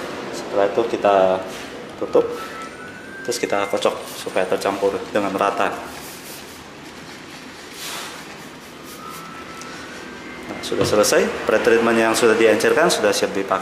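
Nothing stood out on listening to this audio.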